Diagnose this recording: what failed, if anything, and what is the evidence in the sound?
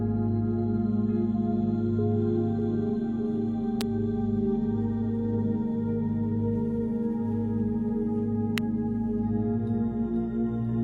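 Two sharp snaps sit on top of the sound, at 3.81 s and 8.58 s. Both are very brief. This is an electrical switching spike in the analogue wiring. The likely cause is a nearby switch, motor or static discharge arcing into the line.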